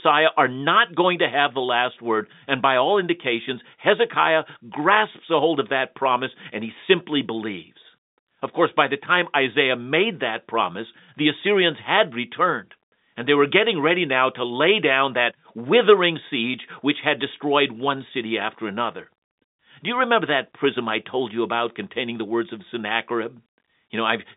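The speech sits within a telephone band of 200 Hz to 3.7 kHz, with nothing above 3.8 kHz, as expected of G.711 telephone coding, and no technical faults can be heard anywhere in the signal.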